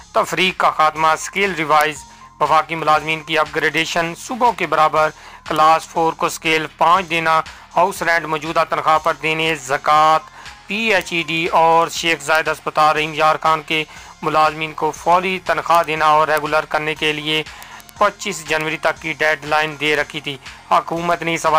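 From 0.11 s to 21.56 s, word clock ticks run through the sound at a steady rate of about ten per second, around two hundred in all, sharp and uneven in strength. The receiving device is not locked to the sender's clock, and the mismatch points to an error of around 200 parts per million, so each slip drops or repeats a single sample. On a spectrogram they form evenly spaced thin vertical lines; the waveform shows tiny single-sample steps.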